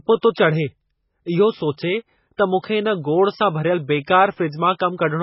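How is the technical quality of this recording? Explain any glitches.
Technical quality is poor: heavy low-bitrate coding damage runs through the whole clip, and one transient shows a brief pre-echo.

MP3 compression: Throughout, the speech has nothing above 5.6 kHz, so sibilants sound dull and clipped, and the remaining band has a watery, swirling texture. The likely cause is heavy MP3 coding, consistent with a bitrate near 16 kbps. Starved of bits, the encoder discards the treble above a fixed cutoff and zeroes weak spectral lines, which flicker on and off between frames.

Pre-echo: At 2.37 s, a short burst of hiss, about 18 ms long, precedes a sharp onset, which makes the attack sound softened and smeared. The onset falls late in a transform block, and the codec spreads the quantisation noise it allotted for the loud attack across the entire block. That noise then fills the quiet stretch just before the attack, where nothing masks it.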